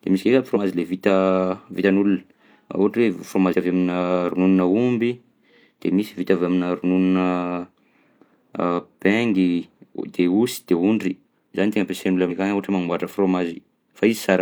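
At 0.51–0.58 s, 3.49–3.55 s and 12.26–12.32 s, compressed frames are skipped, so the speech jumps ahead by about 0.1 s, then 0.15 s twice. Unlike a dropout, there is no silent gap; the audio simply jumps ahead.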